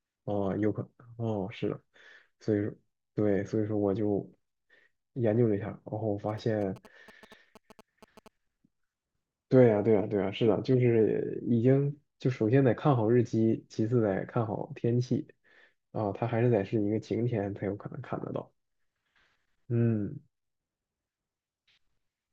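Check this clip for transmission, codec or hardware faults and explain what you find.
GSM signalling bursts interrupt the speech from 6.29 to 8.28 s. A nearby 2G phone, exchanging short signalling bursts with its network, radiates pulsed radio energy that the audio circuitry picks up and rectifies into the signal path. The result is a galloping dit-dit-dit of short buzzes at a 216.7 Hz repetition rate, sitting about 20 dB below the speech and stopping once the bursts end.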